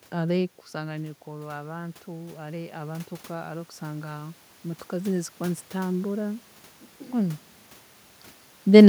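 Automatic gain rising runs from 0.72 to 6.51 s. After the talker moves back around half a second, the speech level drops by about 12 dB. The gain control slowly adds about 10 dB, so the voice and room noise swell together.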